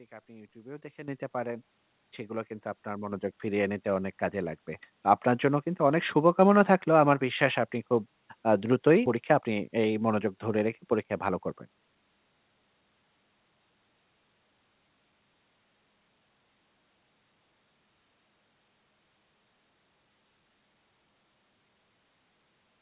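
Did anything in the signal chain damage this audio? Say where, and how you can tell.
Yes. In the call processing stage, automatic gain control found the microphone too quiet and raised its input volume in three microphone volume steps up: about 10 dB at 1.08 s, then about 4 dB at 2.1 s and 3.12 s. Speech and background jump louder together at each step.

At the network and jitter buffer stage, playback skips ahead at 9.06 s. About a second of speech was discarded with no fill, and the sound on either side is spliced almost directly. Dropping that much audio cut the buffered delay by about the same amount.

From 9.16 s to 12.03 s the jitter buffer speeds up to shed its remaining excess delay. It repeatedly cuts pitch-period-sized pieces, roughly a third of a second in all, so speech runs at 111% speed, sounding hurried but unchanged in pitch. All of it passes through a G.711 A-law path with nothing above 4 kHz.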